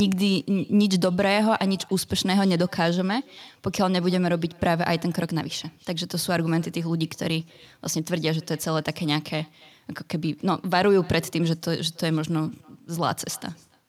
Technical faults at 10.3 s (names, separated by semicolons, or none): echo with no canceller